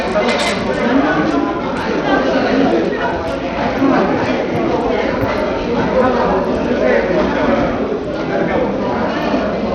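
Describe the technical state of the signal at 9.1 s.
At 9.1 s, as throughout, the sound is gritty and grainy with nothing above 15 kHz, likely Bluetooth SBC compression starving its top sub-bands of bits at a bitrate near 80 kbps.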